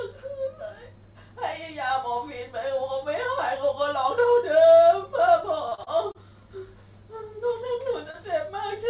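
From 5.69 to 6.17 s the sound turns choppy, with small pieces missing: repeated packet loss (robotic sound). Four holes, the longest about 30 ms, were each patched by continuing the last sound, so roughly a quarter of that stretch is concealment rather than real audio.

Overlapping that, from 5.97 to 6.41 s, the audio drags, running at about 89% speed at unchanged pitch with drawn-out sounds. This is a jitter buffer slow-down: the receiver repeated pitch periods to rebuild its reserve, adding 55 ms.

At 8.11 to 8.16 s there is a brief smear where about 30 ms of audio never arrived. This short concealed packet loss was filled by extending the preceding sound for 27 ms, then blended back in. Throughout, the call path passes nothing above 4 kHz.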